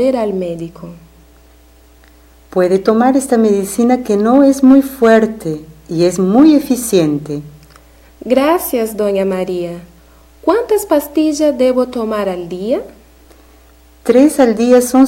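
No technical faults are audible anywhere in the clip.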